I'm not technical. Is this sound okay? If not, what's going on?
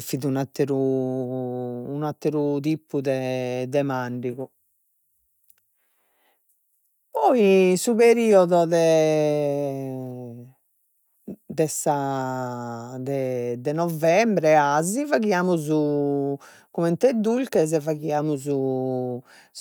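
Yes, this sound is okay, and nothing is going on that needs fixing.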